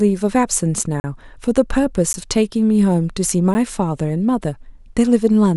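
Speech with three abrupt dropouts: a short hole from 1.00 to 1.04 s (40 ms), and brief ticks at 2.13 s and 3.54 s (10 ms each). These are blocks of digital silence. The sound cuts out and returns with no fade, as when an output buffer isn't filled in time.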